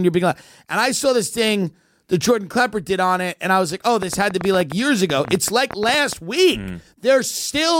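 Speech with a train of clicks from 4.03 to 6.14 s, starting just after "I was like oh": about twenty sharp, similar ticks at roughly nine per second, unevenly spaced and standing well above the voice. Interference from nearby equipment or a faulty connection or power supply is the likely cause.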